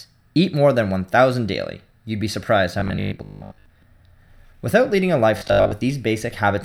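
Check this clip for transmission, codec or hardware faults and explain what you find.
Two faults are present in the speech, both robotic sound from repeated short buffers: 2.80 to 3.66 s, after "be surprised how", and 5.38 to 5.72 s, after "leading a". Each turns into a rigid 50 Hz buzz, likely from audio arriving too seldom, with a 20 ms buffer replayed in place of most of the real signal.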